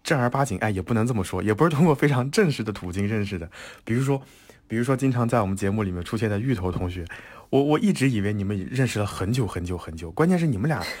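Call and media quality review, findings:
Crude rate conversion, whole clip. Gritty, inharmonic fizz riding under the speech, strongest on loud and sibilant passages. Fits a nearest-sample 48 kHz to 44.1 kHz conversion: samples dropped on a fixed repeating pattern, no interpolation filter. Error roughly 30 dB below signal. Unlike codec artefacts, no frame-rate warble or swirl. The fizz follows signal level and brightness continuously.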